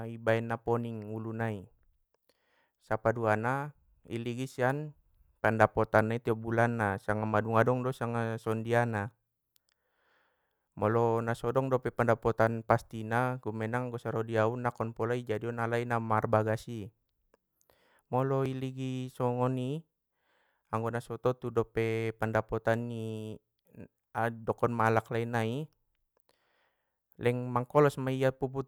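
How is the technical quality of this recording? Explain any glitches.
The recording has two brief glitches, at 8.46 s and 18.46 s. At each, the speech jumps forward abruptly by only a few milliseconds, with no gap of silence, so it sounds like a tiny skip in the flow. The two skips fall exactly 10 s apart, which likely points to audio missing between chunks: the system handles the sound in 10-second blocks and drops a sliver each time one block ends and the next begins, then butts the two edges together.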